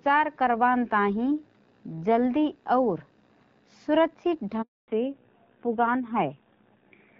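At 4.62 s the speech fades out within a few tens of milliseconds and stays silent until 4.88 s, a 260 ms hole. This is a handover gap: the call switched networks and no speech frames arrived during the changeover, so that stretch of speech is lost.

From 4.88 s to the end, the speech sounds duller, boxier and rougher, with nothing above 4 kHz. This is a fallback to narrowband. Before the gap the speech is clear and carries some airy top end from the AMR wideband (HD Voice) codec's noise fill, which fits AMR-WB at about 12.65 kbit/s. Afterwards the call has dropped to an older narrowband codec, and the coarser sound points to AMR-NB at around 7.4 kbit/s.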